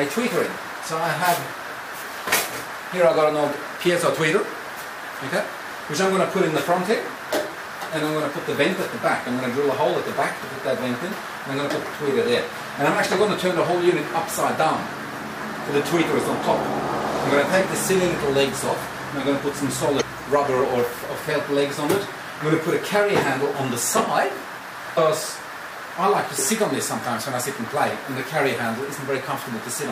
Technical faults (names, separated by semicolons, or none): damaged data in a compressed stream